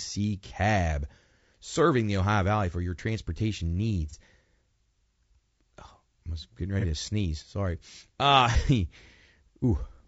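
The whole clip has a rough, grainy edge, with noise filling the gaps between the voice harmonics and a thin, slightly synthetic top end. That's likely low-delay AAC compression (AAC-ELD), whose short frames struggle with pitch detail at a low rate, around 32 kbps by the sound of it.

There's AAC frame loss with concealment at 0.47 s, at 4.10 s after "for your transportation", at 6.80 s between "was getting" and "to sneeze", and at 8.51 s. Each is a brief smeared, noisy blip of about 30 ms, which fits a single dropped frame patched over from the last good spectrum.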